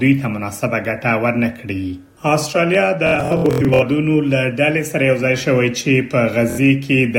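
Bluetooth stutter hits the audio at 3.07 to 3.83 s, with its longest run of repeats lasting 93 ms, and again at 6.50 to 6.59 s, as late wireless packets make the receiver replay short slices.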